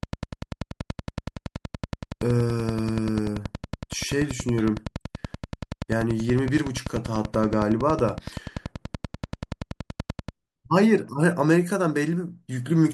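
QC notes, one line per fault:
0.03–10.3 s train of clicks: steady ticking at 10.5 per second, about a hundred clicks peaking well above the speech, likely interference from nearby equipment.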